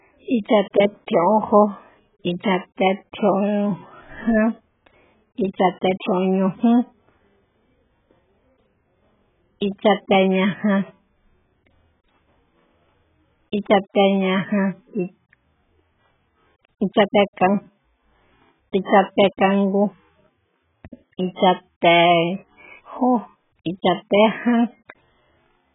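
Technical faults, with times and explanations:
Throughout, AAC compression: the speech stops dead at 3.8 kHz and sounds dull and smeared, with heavy damage that fits a bitrate near 8 kbps, likely from AAC-LC.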